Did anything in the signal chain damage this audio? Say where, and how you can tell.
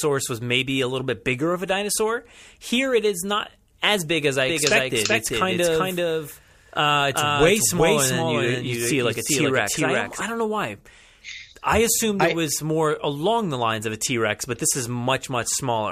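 Yes. From 4.49 s to 10.21 s the speech carries a doubled audio track: a full-band copy trailing around 0.4 s behind, roughly 5 dB quieter, with no decay or room colour, switching on and off abruptly at those times. On a spectrogram every syllable's pattern reappears shifted right by that fixed gap; the waveform shows a sudden step in density. The likely cause is a second, slower capture path or an edit leaving two out-of-step copies mixed together.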